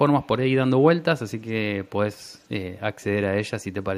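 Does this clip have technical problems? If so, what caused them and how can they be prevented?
Yes. Echo leak: a far-end echo canceller likely let loudspeaker pickup through, so a very faint copy of the speech returns about 215 ms late at 0.22, 1.47, 1.85 and 2.14 to 2.47 s. Using a headset or better-tuned echo cancellation on the loudspeaker side would prevent it.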